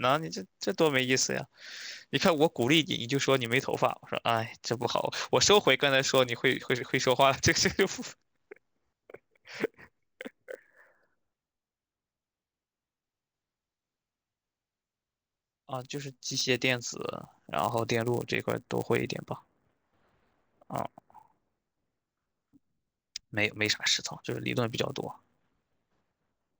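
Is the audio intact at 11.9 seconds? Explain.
No. The resampler restarted on every block runs through the whole speech clip, including 11.9 s. Each 10 ms block was converted from 16 kHz to 48 kHz alone, so every block edge carries an error, heard as a 100 Hz buzz under the speech.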